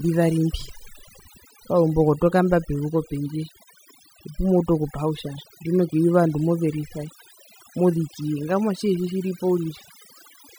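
Overdone noise removal runs through the whole clip. The noise reducer was pushed too hard, so frequency bands near its noise estimate get switched down or off, taking quiet parts of the speech with them. You hear near-silent gaps with twinkly specks.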